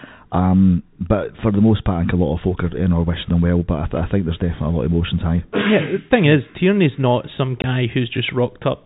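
The speech is carried over a G.711 telephone path, so nothing above 4 kHz comes through. At 7.62 to 7.64 s, just after "not some", there is packet loss filled with silence: a 20 ms hole with abrupt edges. That length fits one lost 20 ms packet. The gap is plain silence rather than a smeared or repeated fragment, which separates it from concealment that patches the loss with synthesised audio.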